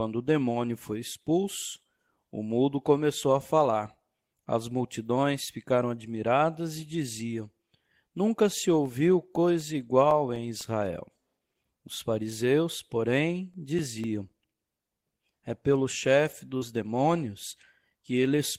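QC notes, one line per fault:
8.85 to 11.11 s, CD scratch ticks: ten ticks at about four a second. Each is a few milliseconds of interpolated or muted samples. A surface flaw spoiled more data than error correction could repair, once per disc turn.
13.29 to 15.29 s, CD scratch ticks: nine more at the same rate, the longest about 5 ms. The regular spacing follows the disc's rotation.
16.57 to 16.63 s, short concealed packet loss: about 40 ms of audio arrived too late to decode. The receiver filled roughly 38 ms by extending the preceding sound, then blended back into real audio. It is heard as a brief smear or wobble. A short consonant could be swallowed there. The gap was filled, so it is not a clear dropout.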